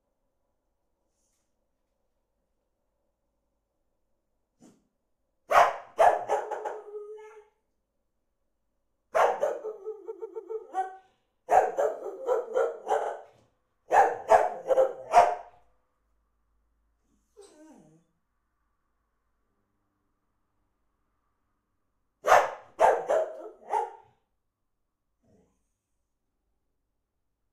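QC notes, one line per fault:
3.32 to 14.79 s, repeated frames: short blocks of compressed frames play again, giving stutters at 3.32 s (92.9 ms block, three extra plays), 6.50 s (139.3 ms, two), 10.10 s (139.3 ms, three), 13.01 s (46.4 ms, two) and 14.72 s (69.7 ms, one). Block lengths are whole multiples of about 23 ms, which fits 1024-sample codec frames. Unlike a dropout or a looping buffer, nothing is lost: each repeat lengthens the audio, about 1.14 s in total.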